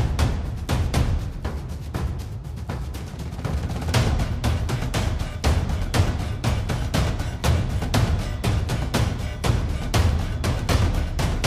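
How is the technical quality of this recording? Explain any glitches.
Nothing in this recording jumps out as a glitch, so there's nothing to explain.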